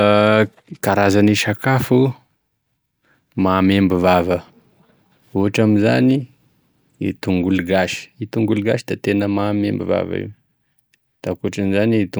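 Nothing goes wrong anywhere in this speech recording; there's no technical fault to point to at any moment.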